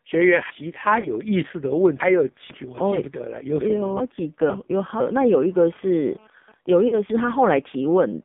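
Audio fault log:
throughout: AMR narrowband mobile codec. The audio sits in a band of roughly 150 Hz to 3.6 kHz, with nothing above 4 kHz. Heavy buzzy, synthetic colouring points to a low mode around 5.9 kbps. Unlike a plain low-pass filter, the codec rebuilds the sound from pulses, so it turns metallic rather than just dull.
0.5–2.5 s: chunks out of order. A half-second chunk plays three chunks late, so the stretch jumbles with hard joins at the splice points. No sound is lost, only displaced, which separates it from frame loss or dropouts, where a piece simply goes missing or smears.
1.0–1.1 s and 6.88–6.96 s: lost AMR speech frames. Each time, about 40 ms of frames fail and the decoder repeats its last pitch and filter settings at falling gain. The result is a brief drawn-out warble and dip, not a clean gap, and the sound returns rough for a moment.
6.3–7.98 s: GSM signalling bursts. 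A nearby phone, in a call while its user was silent, sends short groups of radio bursts that the audio circuit picks up as even ticks with a longer 217 Hz buzz twice a second, about 30 dB below the signal. Their fixed rhythm and pitch set them apart from codec warble or random clicks.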